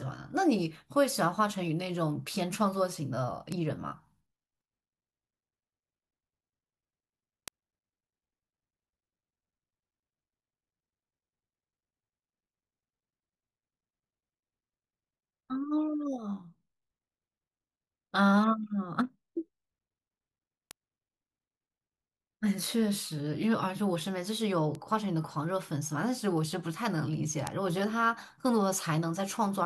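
Bit error spikes, single sharp broadband ticks in this speech clip, occur at 3.52, 7.48, 20.71, 22.64, 24.75 and 27.47 s. Each is one or two corrupted samples jumping to about -24 to -6 dBFS, typical of a flipped bit in memory or transmission.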